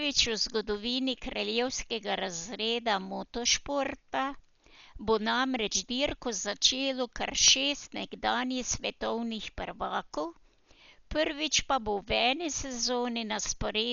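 Dolby Digital compression throughout, likely from a stream around 48 kbps. The encoder cut everything above 7 kHz and starved bands of bits, which the decoder filled with noise, leaving dull, heavily damaged, rough-fluttering speech.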